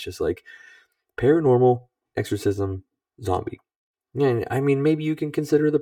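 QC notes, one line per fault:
Throughout: channel delay (comb filtering). One channel runs about 3 ms behind the other, and summing to mono cancels shared content at evenly spaced frequencies starting around 200 Hz. The fixed notches leave the speech hollow and phasey across the whole clip.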